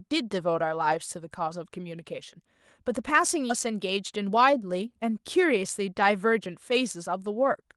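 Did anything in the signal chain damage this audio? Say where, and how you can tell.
Yes. Skip ahead at 3.49 to 3.51 s, in the network and jitter buffer stage. The speech jumps forward with no filler and no silence. About 400 ms of audio is missing, and the two sides are butted together almost directly. This happens when a stretch is dropped in transit or discarded by an overflowing jitter buffer while later packets are already queued. Playback simply resumes from the newest audio, so latency drops by roughly the same amount.

Jitter buffer speed-up from 3.71 to 4.88 s, just after the jump. The speech runs at about 108% speed while the pitch stays unchanged, which gives a slightly hurried delivery. That combination points to time compression in the receiver's jitter buffer rather than a resampling error. The buffer held more audio than its target and trimmed short pitch-period-length slices, one after another. 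In total roughly 100 ms was removed to pull the delay back down.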